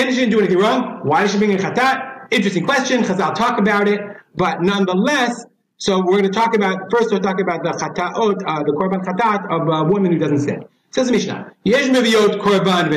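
Gain pumping runs throughout: the gain swings by about 15 dB, likely from heavy limiting of an overdriven input, unlike a gate's hard silences.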